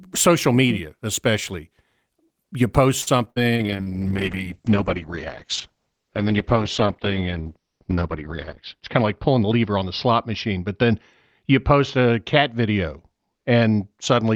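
A short stall from a late packet occurs at 3.01 to 3.08 s. A packet arrived late, the jitter buffer ran dry, and the receiver stretched the last sound for 51 ms before resuming from the same point. Nothing is lost, but the sound hangs briefly, and the playback delay grows by 51 ms.

A short concealed packet loss follows at 3.24 to 3.28 s. About 20 ms of audio never arrived, and the receiver covered the hole with 17 ms synthesised from the preceding sound. This produces a brief smear or wobble, and a quick consonant can disappear.

A burst of packet loss comes right after, from 3.30 to 3.44 s. Consecutive packets went missing, about 60 ms of real speech in total. The receiver extended the last sound over 58 ms and faded it out, giving a held buzz or fading hiss before speech resumes further on. The concealment also adds 17 ms of extra delay.

A call bitrate drop starts at 3.56 s and lasts to the end. 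The bandwidth estimate fell, and the encoder went from 40 kbps down to 8 kbps, remaining at the lowest rate for about 4.9 s. The audio band narrows from 20 kHz to 6 kHz, so speech turns muffled, rough and watery.

A jitter buffer speed-up runs from 8.75 to 9.59 s. The buffer had built up surplus audio, so the receiver repeatedly cut out short pitch-period slices, roughly seventy milliseconds in all. Speech plays about 6% faster at unchanged pitch and sounds slightly hurried.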